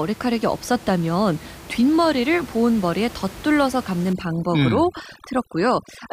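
From 4.13 s to the end, overdone noise removal sets in: a noise reduction stage pushed far too hard starts switching off individual frequency bands whenever their level drops near its noise estimate. The room noise, sitting about 19 dB below the speech before this point, drops and breaks up into twinkling specks, and the quieter parts of the speech are stripped away with it.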